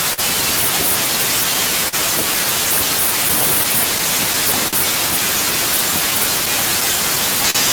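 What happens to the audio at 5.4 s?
At 5.4 s the speech falls within small timing hiccups, uneven stumbles running through the whole clip, where short pieces of audio are repeated. This is clock drift between sender and receiver. The sender's clock runs roughly 3 percent slower than the receiver's, so the jitter buffer keeps draining, and the receiver fills the gap by repeating short pieces of audio.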